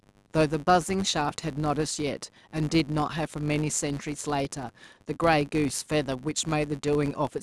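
Speech clip with a filter restarted on every block, all the way through. Each 10 ms block starts from silence because the filter state isn't carried over, so every boundary kicks off a little transient. Together they make a steady 100 Hz buzz that rises and falls with the speech level.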